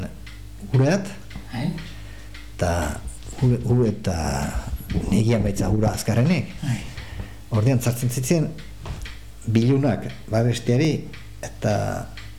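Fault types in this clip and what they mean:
Block of digital silence: at about 10.85 s the audio drops straight to silence for only 0.67 ms, roughly a 32-sample block, then snaps back with no fade. That's far too short to hear as a gap, so it comes across as a tick or dip.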